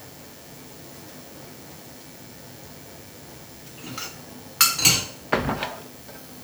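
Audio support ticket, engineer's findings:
DECT cordless phone buzz throughout: thin steady 100 Hz buzz, harmonic-rich, sitting well under the sound. Nearby handset or base bursting every 10 ms, rectified somewhere in the audio input path.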